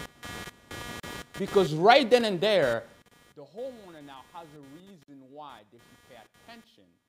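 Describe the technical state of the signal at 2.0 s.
At 2.0 s, computer activity noise runs throughout: ground currents from processor load inject a buzz pulsing around 200 Hz, roughly 20 dB below the signal, visible as evenly spaced spectrogram harmonics.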